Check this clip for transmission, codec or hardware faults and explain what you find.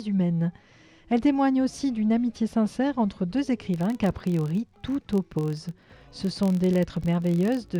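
One fault is present: a filter restarted on every block, from 3.74 s to the end of the clip. From that point a filter stage loses its internal state at each block boundary and starts again from zero, so every block opens with a short transient. These repeat as a steady buzz at about 43.1 Hz, which fits a 1024-sample buffer, and the buzz grows louder and quieter with the level of the sound.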